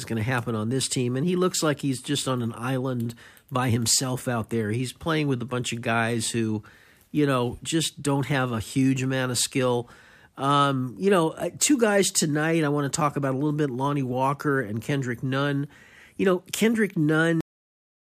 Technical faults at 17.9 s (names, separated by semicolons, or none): cut-off end